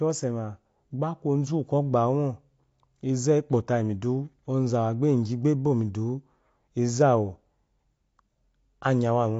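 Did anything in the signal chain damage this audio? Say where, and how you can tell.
Yes. Throughout the speech the sound is dull and smeared, with nothing above 7.7 kHz and a warbly, fizzy edge on sibilants. That points to the codec stage, likely AAC compression at a low bitrate, which fits about 32 kbps AAC-LC.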